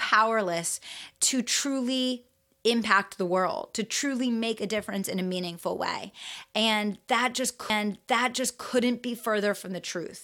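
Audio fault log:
7.69–8.69 s, stream segment repeated: about one second of speech plays a second time because the player queued the same segment twice, with a small blip at the jump back. On a spectrogram the same one-second pattern appears twice in a row, and the waveform shows a hard discontinuity at the seam.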